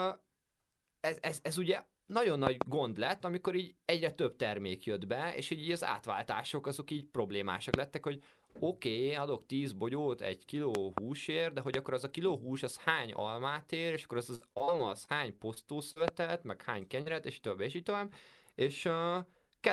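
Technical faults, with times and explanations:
2.47 to 2.64 s, 7.74 s, 10.75 to 11.00 s, 11.74 s, 16.08 s: loud pop. Each is a sharp click or thump sitting on top of the speech, with the talking continuing underneath. The events at 2.47 s and 10.75 s are double pops. The 7.74 s pop falls between "átváltások azok így problémásak" and "lettek hogy oké okay". The 11.74 s pop falls between "de hogy" and "akkor az a kiló". Peaks reach about 25 dB above the speech at 2.47, 7.74 and 16.08 s, and about 20 dB at 10.75 and 11.74 s. The cause is likely an electrical step or spike, such as static, a switch or a driver glitch, whose edge the downstream circuitry rounded into a pop. Unlike packet loss, nothing is missing from the speech. The pulse is simply added on top.
14.35 to 14.69 s and 15.05 to 15.98 s: repeated packet loss (robotic sound). In each stretch, four separate holes of up to about 40 ms open in quick succession. 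Every hole is patched by extending the previous sound, so the voice turns choppy and machine-like, with fragments gone. Concealment covers about 35% of the first span and about 11% of the longer second one. A single dropout would only smear. Here the patches come back to back, which produces the robotic texture.
17.02 to 17.08 s: short concealed packet loss. About 40 ms of audio between "meg hány" and "és több és így" never arrived in time. The receiver filled it by continuing the preceding sound and then crossfaded back into the real signal. The result is one brief smear or wobble, possibly swallowing a consonant. Because there is only a single isolated gap, it lacks the sustained robotic chop of the runs at 14 to 16 s. The speech around it carries the usual coding texture of an Opus call at 32 kb/s, band-limited to 12 kHz.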